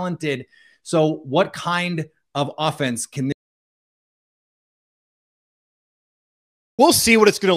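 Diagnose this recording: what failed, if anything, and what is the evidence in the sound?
An audio dropout to silence, likely a lost input while recording continued, blanks the speech from 3.32 to 6.79 s, with no room tone remaining.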